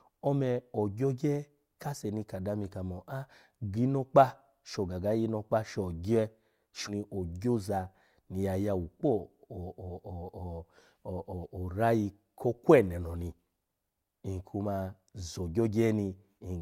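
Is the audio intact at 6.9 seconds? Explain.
No. From 6.87 to 6.92 s the player likely failed to load one segment of the stream and moved on to the next, so a stretch of the speech is missing. The sound jumps abruptly forward, marked by a brief blip at the join.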